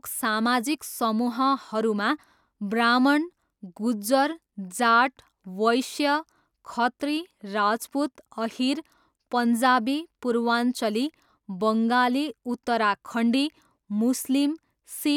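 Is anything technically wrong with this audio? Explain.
No, nothing technically wrong turns up anywhere in this recording, so there's nothing here to flag.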